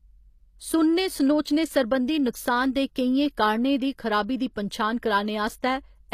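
From the start, the speech has plainly audible damage consistent with HE-AAC compression, likely at a low rate near 24 kbps. The upper band is rebuilt by copying lower bands upward, so sibilants come out gritty and metallic, and their harmonics fail to line up above the crossover. On a spectrogram, the treble appears as blocky, repeated patches that stop cleanly at 15 kHz, with nothing above.

Between 1.42 and 1.45 s there is pre-echo: a short hiss lasting about 39 ms comes before an attack, which itself sounds softened. The codec spread the quantisation noise meant for the loud onset across the quiet moment just before it. A waveform view shows a low fuzzy smear leading into the transient. A spectrogram shows a broadband wash that appears ahead of the onset instead of a clean vertical edge.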